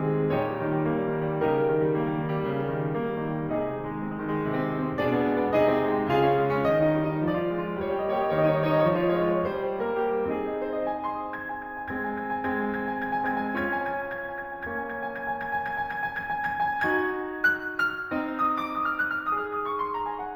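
Imaging from linear upsampling runs through the whole music clip. The audio was raised from 16 kHz to 48 kHz by joining samples with straight lines. That is a weak filter. The top of the original band, near 8 kHz, sounds dulled. A mirror copy of the spectrum survives between 8 kHz and 16 kHz, roughly 40 dB below the music. It adds a faint metallic shimmer to bright, high-pitched sounds.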